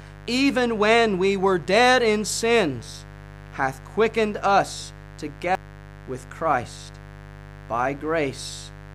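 From the start of the clip to its end, a steady, raspy mains buzz sits under the speech at roughly 20 dB below it. Its fundamental is 50 Hz, but the rasp comes from the harmonics stacked above it, reaching up into the kilohertz range. That points to sharp switching spikes, twice per mains cycle, leaking in from a dimmer, a rectifier or an unshielded run somewhere in the signal path. Because it never changes, it reads as a fixed layer of grit rather than as part of the recording.

At 5.55 s there is a short blip caused by damaged data in the compressed stream. Some bytes in the encoded file were lost or overwritten at that point, so the decoder misread the affected frame and dropped sync. It then had to hunt for the next valid frame header before resuming. The result is a brief glitch before the audio carries on.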